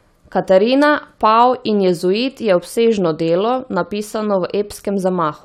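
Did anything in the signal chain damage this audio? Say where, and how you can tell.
No, nothing in the signal chain audibly damaged this speech recording. No stage left a fault that can be heard anywhere in it.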